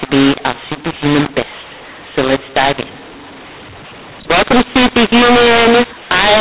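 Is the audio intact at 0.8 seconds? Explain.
No. At 0.8 s, as throughout, mu-law and A-law are mixed up: mu-law speech read as A-law scrambles levels, making it harsh, unlike clipping, and filling pauses with noise.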